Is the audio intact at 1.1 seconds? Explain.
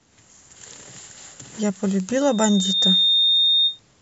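Yes, the speech at 1.1 seconds is intact, with no audible fault at that moment.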